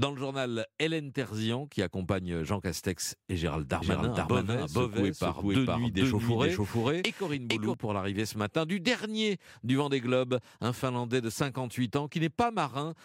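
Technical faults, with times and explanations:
3.82 to 7.74 s, doubled audio track: the speech suddenly gains a second, equally loud copy trailing about half a second behind, clean and dry with no room tail, then it cuts off abruptly. This is likely a second capture path or misaligned edit layering the same audio.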